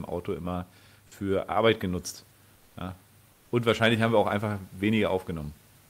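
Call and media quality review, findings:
Comfort noise in place of the background, 2.55–2.75 s and 3.31–3.51 s. Room noise, about 36 dB under the speech, gives way for roughly 200 ms each time to flat, featureless hiss, about 2 dB and about 3 dB quieter respectively. Likely sender-side discontinuous transmission, consistent with Opus DTX: the voice detector gates the pauses, and the receiver synthesises shaped noise until the sound resumes.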